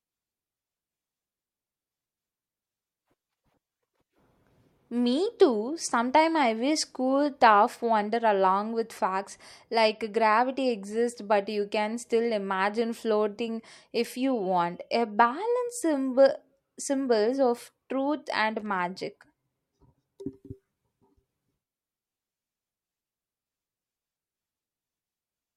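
At 18.60 s, right after "symbols of truth and", a burst of loose connector crackle runs until 18.79 s. It lasts about 0.19 s. A worn or dirty contact in the signal path was shifting. It made and broke the connection many times in quick succession. Each break chopped the speech signal. The result is a short, irregular scratching crackle laid over the speech.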